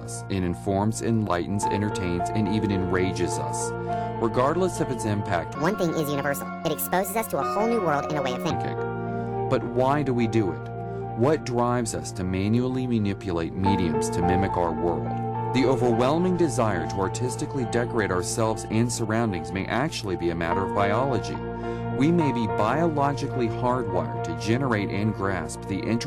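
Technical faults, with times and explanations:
5.55–8.51 s, section at the wrong speed: this stretch runs about 1.57 times too fast, so everything jumps up roughly seven semitones and hurries along, then snaps back at the end. Speed and pitch moving together like that likely means it was played against the wrong clock.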